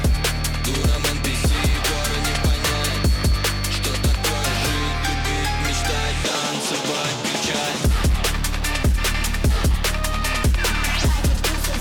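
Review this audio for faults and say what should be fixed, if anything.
A feedback whistle runs from the start to 4.99 s. It is a thin, steady tone at 4.4 kHz. It sits about 20 dB below the main sound and swells and fades slowly in level. The likely cause is a loudspeaker-to-microphone loop held just at the edge of feedback. One frequency keeps ringing but never builds into a howl. The tone should be notched out of that section. To prevent it, lower the monitor gain or move the microphone out of the loudspeaker's path.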